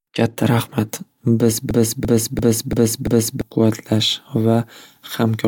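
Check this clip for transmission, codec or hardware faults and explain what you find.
A system hang loop runs from 1.71 s to 3.41 s. The computer or its audio driver stalled, and the sound hardware kept replaying the last 341 ms block from its ring buffer, a length that fits a 16384-sample buffer. That block repeats five times, at about 2.9 per second, giving a skipping-record effect of identical fragments of speech. About one and a half seconds of real speech is lost.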